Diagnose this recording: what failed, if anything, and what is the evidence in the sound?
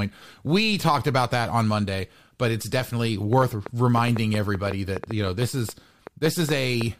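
A train of clicks runs from 3.33 s to 6.82 s, starting just after "but it's definitely": about twenty similar pulses at an uneven pace near 5.5 per second, peaking roughly 10 dB above the speech and audible in pauses. Likely cause: interference coupling into the analogue wiring, or a faulty connection or power supply.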